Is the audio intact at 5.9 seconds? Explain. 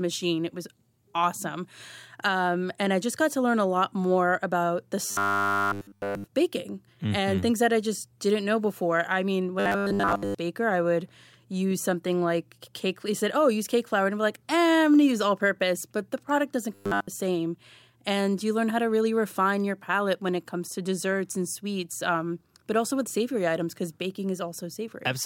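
No. Robotic sound from repeated short buffers runs from 5.06 to 6.24 s, just after "lot more about the". A 10 ms stretch is likely being replayed over and over throughout, fixing a 100 Hz metallic buzz on the voice that only loosely tracks the words.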